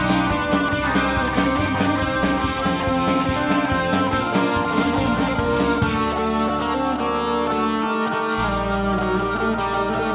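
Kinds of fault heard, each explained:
No faults detected; the audio carries a narrowband call path's ordinary band limit, with nothing above 4 kHz, which fits G.711 mu-law coding.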